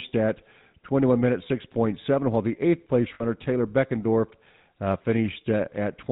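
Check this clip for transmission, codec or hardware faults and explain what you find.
Two faults are audible in the speech: codec damage throughout and a brief dropout.

From start to finish the speech has a buzzy, gravelly roughness and nothing above 4 kHz. This is the GSM full-rate codec, consistent with 13 kbps. It models the vocal tract and excites it with sparse, regularly spaced pulses, so the fine texture of the voice is lost and the damage is plainly audible.

From 3.14 to 3.25 s there is a rough, metallic ring, from lost GSM frames. About 60 ms of coded speech, which fits three frames, went missing. The decoder repeated the last good frame's settings to fill the gap, so the sound is held as a ring instead of continuing.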